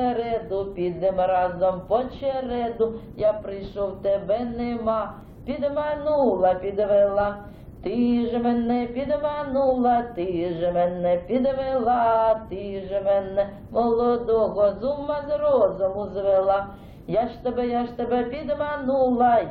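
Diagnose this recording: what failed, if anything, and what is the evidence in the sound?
The failure is in segmented stream delivery, an overlap between stream segments. At 5.21 s there is a tiny skip where a few milliseconds of sound go missing. Two consecutive segments, which appear to be about 6 s long, claim overlapping time, and the player trims that span, so the waveform jumps across the gap.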